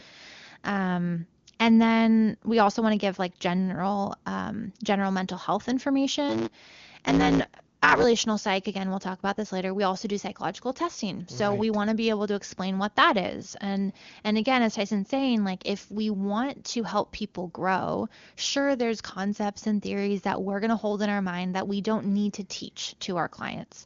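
From 6.28 to 8.04 s there's a block size mismatch (truncated). One stage hands over blocks longer than the next one reads, so the tail of every block gets dropped. You hear a buzz at about 109 Hz, the block rate, riding on the speech, and the speech hurries along about 1.16 times faster while the timbre stays the same. The numbers fit 512-sample blocks being cut short. Throughout, the audio tops out near 7.2 kHz, as the AMR wideband codec does.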